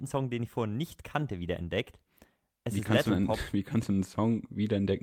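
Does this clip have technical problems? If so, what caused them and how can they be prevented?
No, no technical problems can be heard in this speech recording, so there is nothing to trace to a cause or guard against.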